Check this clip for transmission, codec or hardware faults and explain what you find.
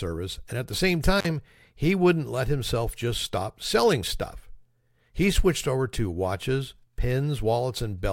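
There's one hardware fault here: an intermittent contact at about 1.19 to 1.27 s, right after "and at the same" and before "he wouldn't let himself". A loose plug or cable briefly opens the line for roughly 45 ms, so the speech drops out or breaks up, with a crackle at each edge and faint hiss left while the connection is broken.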